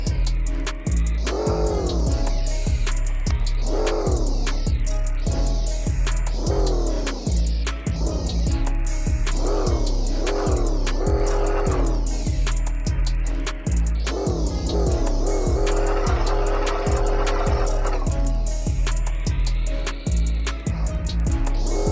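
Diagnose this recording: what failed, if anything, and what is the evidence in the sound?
Resampler restarted on every block, throughout: a tick recurs every 50 ms, a 20 Hz rough buzz riding on the signal and falling away in silence. The conversion stage, apparently 44.1 kHz down to 16 kHz, processed each block in isolation, leaving a small error at every block edge.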